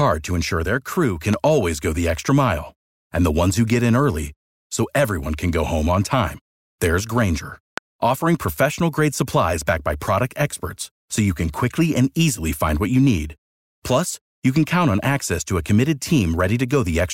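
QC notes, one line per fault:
1.34–1.36 s and 7.78–7.80 s, loud pop: a single sharp pop each time, roughly 15 dB above the speech, first between "ensure their crew can" and "always go the extra", then just before "offering professional grade supplies", with speech continuing underneath. The likely cause is a brief voltage pulse from a switch, plug, static or driver glitch.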